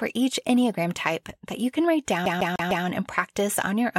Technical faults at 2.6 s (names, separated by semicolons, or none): CD stuck on one turn